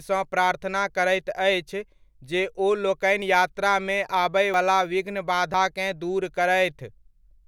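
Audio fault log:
3.22 s, 4.54 s and 5.54 s: dropped buffer (overrun). At each spot the speech jumps ahead with no gap. About 20 ms vanishes at 3.22 and 5.54 s, and nearer 70 ms at 4.54 s. Likely cause: samples overwritten before being read.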